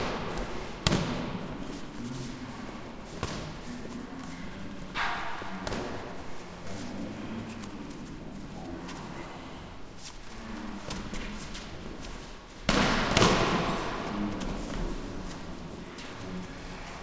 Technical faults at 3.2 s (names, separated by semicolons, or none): wrong sample rate